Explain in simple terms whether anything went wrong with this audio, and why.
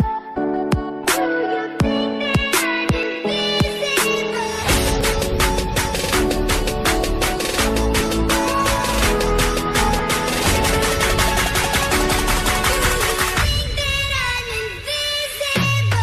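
Four tiny clicks or skips, at 1.05, 3.03, 5.01 and 9.99 s, come from overlap between stream segments. The audio arrives in one-second pieces whose timing overlaps, so the player trims the overlap and drops a sliver of real sound, making the waveform jump.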